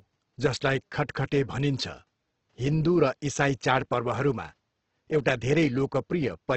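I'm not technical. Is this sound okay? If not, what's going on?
No. Opus compression runs through the whole clip: the speech sounds rough and grainy, likely because it was squeezed hard to save space, so the encoder filled in missing detail with noise. The faint room noise behind it belongs to the original recording.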